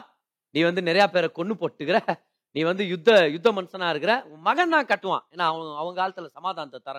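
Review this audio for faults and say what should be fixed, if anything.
Microphone overload can be heard as a brief harsh crackle on the loudest peaks at 1.00–1.04 s, 3.08–3.20 s and 4.92–4.94 s, with peaks pushing about 3 dB, 3 dB and 2 dB past the limit. The likely cause is input gain set high enough that the converter flattens the wave tops. On the waveform those peaks look squared off, and on the spectrogram they show as vertical smears of added high-frequency energy. Lowering the input gain to leave several decibels of headroom would prevent it.

Microphone volume stepped down at 1.02 s, right inside the first crackle: the sound and background drop by about 1 dB at once, likely the call software reacting to the overload by lowering the device's input gain in one step. On the waveform the envelope sits slightly lower from that point, and the spectrogram darkens faintly across all frequencies. 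Setting the gain correctly beforehand, or disabling automatic gain adjustment, would avoid the sudden step.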